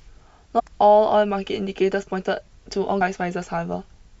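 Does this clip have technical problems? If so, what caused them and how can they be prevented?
Yes. The speech carries two brief bursts of damaged data in a compressed stream, from 0.58 to 0.60 s and at 3.00 s. Corrupted bytes made the decoder misread those frames and lose sync until it found the next valid frame header. The result is a brief disruption in the speech at each point. Checksummed storage and transfer, with error-detecting transport for streams, would prevent it.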